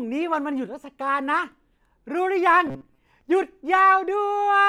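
Robotic sound from repeated short buffers appears from 2.67 to 2.98 s, where the speech collapses into a rigid, metallic buzz pitched at 134 Hz that still loosely tracks the words. The likely cause is audio arriving too seldom, so the playback side loops a tiny slice of roughly 7.5 ms to fill the gap while fresh audio is dropped. About half the sound in that stretch is repeated material, which is what imposes the fixed pitch.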